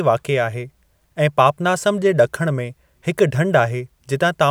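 No technical faults can be heard anywhere in the speech.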